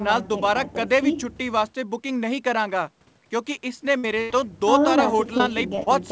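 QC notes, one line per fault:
3.98–4.05 s and 4.21–4.32 s: burst of packet loss. Two runs of audio were lost or arrived too late to play. The receiver stretched the last sound and faded it, heard as a held buzz or dying hiss. About 60 ms and 80 ms of sound are simply missing.
5.38–5.41 s, 5.75–5.79 s and 5.83–5.88 s: short concealed packet loss. Brief holes of 20 to 40 ms were patched by extending the preceding sound, then blending back. Each gives a quick smear or wobble, and a short consonant can drop out.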